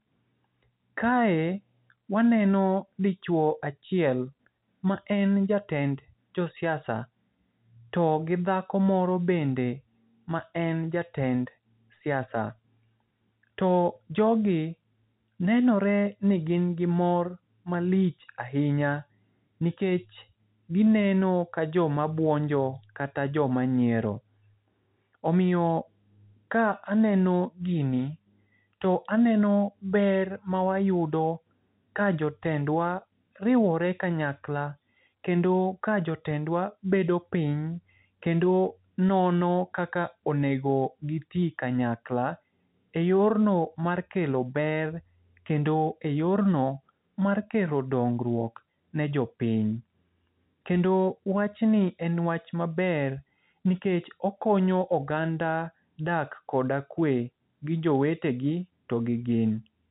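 No faults to report in this speech; nothing reaches above 3.8 kHz, as expected of G.711 telephone coding.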